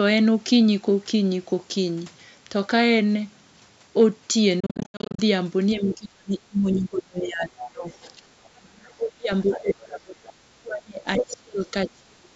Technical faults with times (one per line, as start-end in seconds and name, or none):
4.00-4.04 hard clipping
4.60-5.20 Bluetooth dropout
5.80-12.34 speech suppressed in double talk
7.60-8.08 other side's voice leaking through
8.43-8.47 other side's voice leaking through
9.41-9.74 other side's voice leaking through
11.15-11.36 other side's voice leaking through